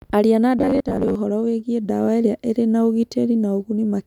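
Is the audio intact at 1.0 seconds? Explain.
No. From 0.59 to 1.15 s the speech has the robotic sound from repeated short buffers: a rigid, metallic buzz near 94 Hz that still loosely tracks the syllables. This is likely caused by audio arriving too seldom, so playback loops a stretch of roughly 10.7 ms, with about half the audio being repeats. Unlike dropouts, there are no gaps, just a steady imposed pitch.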